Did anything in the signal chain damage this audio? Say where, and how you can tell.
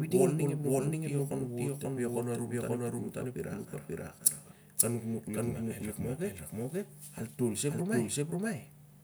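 Yes. A doubled audio track runs through the whole speech clip: every syllable returns about half a second later at roughly the same level, full-band and dry, with no decay or room colour. That separates it from a real echo or reverb tail. The stage is likely the capture or editing chain, where a second, slower path records the same signal again, or an edit leaves two copies out of step and sums them, giving a fixed-offset duplicate.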